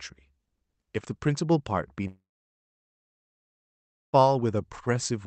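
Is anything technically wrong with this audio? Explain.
Yes. From 2.07 s to 4.15 s the sound breaks off in what is likely a long network dropout: about 2.06 s of audio never arrived. The receiver briefly stretched the last fragment into a fading buzz, then left about 1.9 s of near-silence before the sound resumed with that stretch simply missing. A short packet loss gives only a brief smear, and a natural pause ends without the decaying synthetic tail. The call codec's 8 kHz bandwidth limit can be heard throughout.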